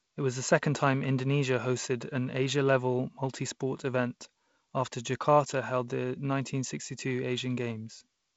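No technical faults can be heard anywhere in the speech. The G.722 wideband telephone coding path can be heard working as designed, with nothing above about 7.7 kHz and the light coding noise that fits a 48 kbit/s stream.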